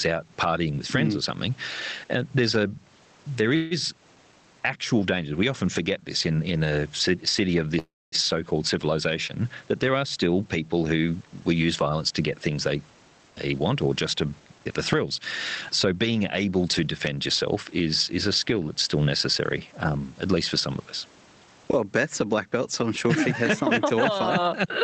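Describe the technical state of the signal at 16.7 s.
At 16.7 s the speech is near the end of a jitter buffer speed-up running from 12.99 to 16.82 s. Repeated one-or-few pitch-period cuts, roughly 0.3 s in total, play it at 108% speed with unchanged pitch. The spectrogram shows harmonics at their normal spacing but syllables compressed in time.

Gain pumping is also present. Gain swings by around 15 dB, likely from excessive gain driving a fast limiter. The waveform shows a squashed, even envelope.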